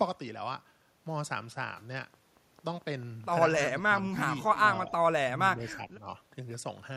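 An echo canceller that likely could not tell the near talker from loudspeaker echo during double talk turned the speech down with it, the fault known as speech suppressed in double talk. From 3.75 to 4.14 s the speech dips by up to about 15 dB for roughly a fifth of a second in all. At 4.86 to 4.92 s there is a brief, shallower dip of about 5 dB. From 5.26 to 6.06 s the speech sinks by up to about 10 dB in pieces, adding up to about half a second.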